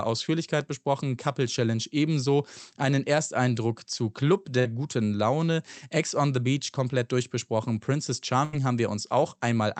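Bursts of packet loss at 4.59 to 4.67 s and 8.45 to 8.55 s: audio went missing in transit, and the receiver stretched the last sound into a fading buzz or hiss for about 53 and 79 ms, then jumped ahead, skipping about 60 and 80 ms of speech.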